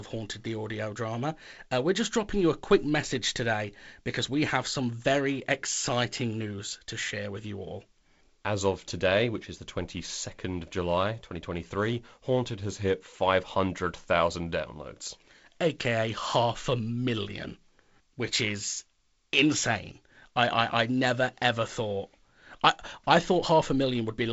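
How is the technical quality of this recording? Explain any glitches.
Nothing stood out on listening to this speech recording, which comes through G.722 wideband telephone coding with a light hiss in the upper band and no content above about 7.7 kHz.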